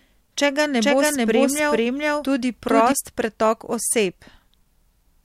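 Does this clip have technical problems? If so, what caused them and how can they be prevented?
Yes. From 0.80 to 2.92 s there is a doubled audio track: a full-band copy with no decay trails roughly 0.4 s behind at about equal level, likely from a second, slower capture path being mixed in. On a spectrogram and waveform, each pattern repeats, shifted in time, with abrupt start and stop edges. Route each source through a single capture path.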